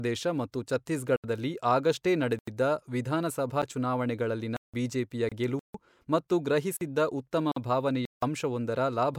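Dropouts start early in this speech. There are blocks of digital silence at 1.16–1.24 s (about 76 ms) and 2.39–2.48 s (85 ms), a 9 ms tick at 3.62 s, and a 171 ms hole at 4.57–4.74 s. At 5.29–5.32 s there's a 27 ms gap at a join of encoded pieces. Then come more silence blocks at 5.59–5.74 s (151 ms) and 6.77–6.81 s (43 ms), another join gap at 7.52–7.56 s (48 ms), and a final 171 ms block at 8.05–8.22 s. The silence blocks most likely come from the output buffer not being filled in time, so the sound snaps straight to silence and back with no fade. The lengths suggest whole buffers of 2048, 4096 and 8192 samples going missing. The join gaps are different. Each separately encoded piece carries its start-up delay and last-frame padding into the join, so the sound stops briefly with smeared edges and then picks up where it left off.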